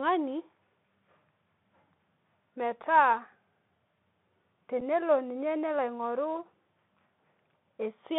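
The whole clip runs through the Bluetooth CVSD headset codec, so the speech sits in roughly 150 Hz to 3.6 kHz, with scratchy s sounds and granular hiss from the one-bit coder. At 4.80 s there's unconcealed Bluetooth headset packet loss: about a packet's worth, 7.5 ms, drops out, leaving a tiny hard-edged gap.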